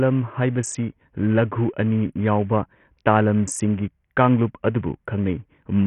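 From start to finish the speech carries damage consistent with Bluetooth SBC compression, likely the cause here. Nothing is present above 11.8 kHz, and the upper band that remains flickers in and out as the coder starves it of bits. The coarse quantisation of the remaining sub-bands leaves a gritty, granular noise and aliasing riding on the sound, which points to a very small bit pool, at a bitrate of 48 kbps.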